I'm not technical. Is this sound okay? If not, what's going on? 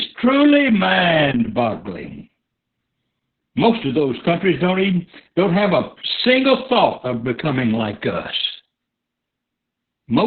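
No. From start to finish the speech sounds muffled, hoarse and a little robotic, like a poor phone line. That is heavy Opus voice compression: squeezed very hard, it discards everything above about 4.4 kHz and only roughly rebuilds the voice's texture.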